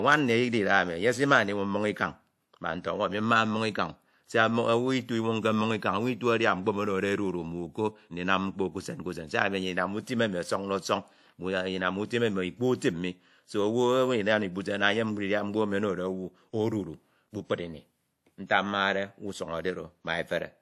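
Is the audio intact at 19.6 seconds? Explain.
No. At 19.6 seconds the speech carries transcoding between lossy codecs, present from start to end rather than at that moment alone. Nothing reaches above 13.2 kHz, and the different artefacts of two codecs are heard together, which fits a likely chain of MP3 around 96 kbit/s into WMA 1 around 64 kbit/s. The second encoder spent its bits on the first one's damage and added its own, while the lowest cut-off survived.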